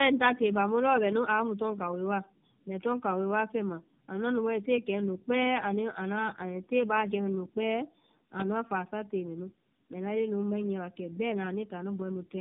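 Throughout the recording, the call shows tandem speech coding: it appears to have been decoded and re-encoded by three low-rate speech codecs in sequence, with the character pointing to iLBC followed by two passes of AMR-NB, bridged by G.711 links. Each coder compounds the previous one's errors, so the speech sounds rough, muffled and warbly, and nothing remains above 3.6 kHz, leaving it thin and band-limited from start to finish.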